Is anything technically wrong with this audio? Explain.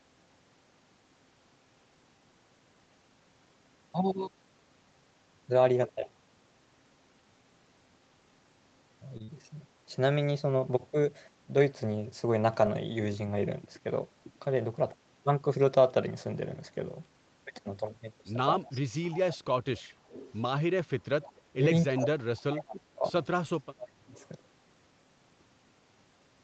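Yes, a few things. At about 9.17 s there's a short stall from a late packet: the jitter buffer ran dry, so the receiver held the last sound for roughly 26 ms until the packet turned up, then carried on. Nothing's lost, just a brief stretched moment with a slight buzz or dip.

Right after, from 9.24 to 9.43 s, there's short concealed packet loss. About 40 ms of audio never arrived in time, and the decoder bridged it by extending the previous sound before blending back in, giving a quick smear or wobble.

Then there's echo leak at 18.67–19.37 s, 19.77–20.39 s, 21.22–21.33 s and 24.14–24.28 s: a faint copy of the talker coming back about 314 ms late, around 20 to 30 dB down. Likely a loudspeaker on one side whose echo canceller didn't fully scrub its mic pickup.

Finally, speech suppressed in double talk at 21.04–21.64 s, 21.95–23.05 s and 23.41–24.12 s. The talker dips hard, up to about 35 dB, losing brightness or dropping out in chunks, likely because the echo canceller couldn't tell the talker from the loudspeaker echo while both sides were speaking.

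The band-limiting to 8 kHz from the Opus call path and the mic processing is just normal call behaviour.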